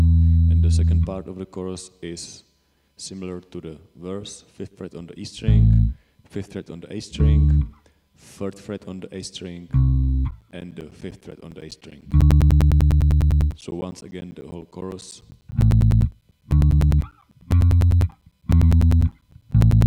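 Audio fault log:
10.31–19.82 s, periodic USB or driver dropouts: every 0.1 s the stream loses about 10 ms to silence, giving roughly a hundred evenly spaced ticks wherever there's signal.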